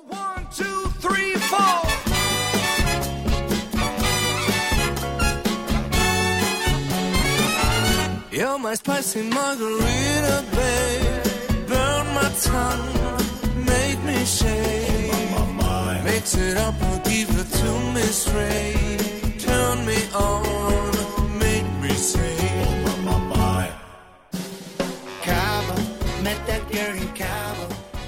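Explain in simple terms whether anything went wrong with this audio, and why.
Nothing went wrong here, because no technical fault can be heard anywhere in the recording. There is no moment that stands out as a problem, so there is no time to point to.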